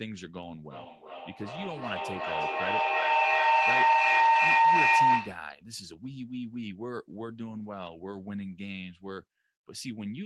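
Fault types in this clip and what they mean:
Feedback howl: a mic-to-speaker loop gaining level each pass builds a tone near 1 kHz, the loop repeating roughly every 0.4 s, peaking about 14 dB above speech.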